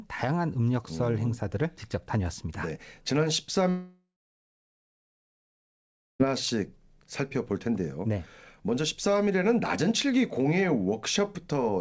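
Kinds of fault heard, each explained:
long network dropout: At 3.70 s the speech breaks off and the last sound drags out as a fading buzz, then about 2.1 s of silence until 6.21 s, when audio resumes with roughly 2.5 s gone, likely lost in transit.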